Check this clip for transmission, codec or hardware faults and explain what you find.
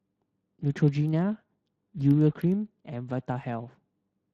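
One fault here, running the whole length: Speex codec damage. It's clearly audible, and the hoarse, noisy texture of the speech fits a mid-rate setting around 22 kbps. The CELP coder gets too few bits to model the excitation properly, so the voicing comes out rough and noisy. Nothing comes through above 14.7 kHz.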